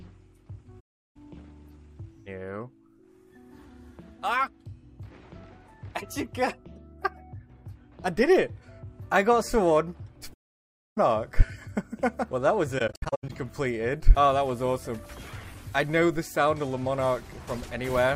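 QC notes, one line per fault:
0.79–1.17 s, 10.33–10.98 s and 12.78–13.31 s, AAC frame loss with muting: the sound fades into silence and back. The first gap lasts about 0.36 s and the second about 0.64 s. The third is broken into several short dropouts over about half a second, the longest near 0.1 s. Lost frames were decoded as zeroed spectrum. The overlapping transform windows soften each edge over roughly one frame, and the gaps' lengths fit frames of about 21 ms.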